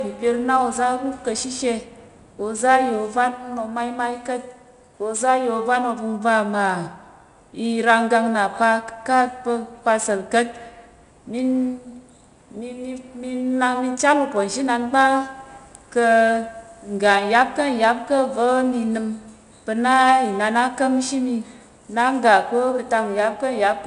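Throughout, 4-bit ADPCM compression codes each sample as a coarse predicted step, adding plainly audible gritty hiss that tracks the speech, with nothing above 10.6 kHz.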